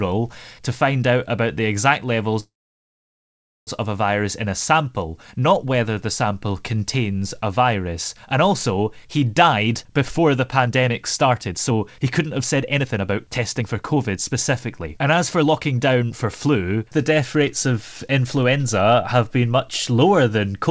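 Packets were likely held up in transit at 2.40 s, after "out about the exact". This call audio freeze left the jitter buffer empty, so a 1.27 s gap, mostly silence, opens before "of a virus in" resumes with nothing lost.

A backlog in the jitter buffer then triggered a jitter buffer speed-up, trimming pitch-period slices. From 9.43 s, after "also he", to 14.34 s the speech runs about 17% fast at unchanged pitch, shedding roughly a second. From 14.84 to 18.96 s, just before "have been", it runs about 10% fast, shedding roughly 0.4 s, and sounds hurried.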